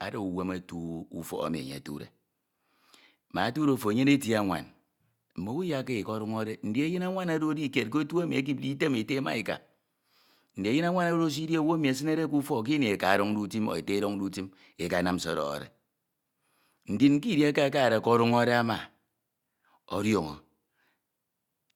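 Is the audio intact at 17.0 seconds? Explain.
Yes, the audio is intact at 17.0 seconds, with no fault audible at that moment.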